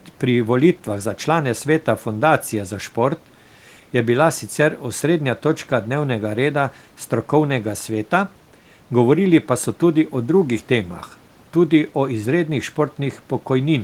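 No technical faults can be heard anywhere in the speech. The only background sound is the room noise picked up by the microphone, sitting about 34 dB below the speech.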